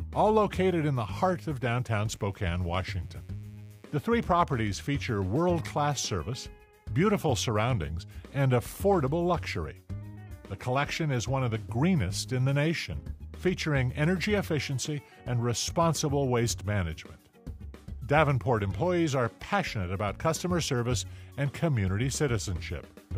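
There's a mains buzz from about 1.86 s to 4.01 s: a raspy, steady hum sitting well below the main sound. It's built on 60 Hz, with switching spikes twice per cycle spraying harmonics into the kilohertz range, as from a dimmer, rectifier or unshielded cable.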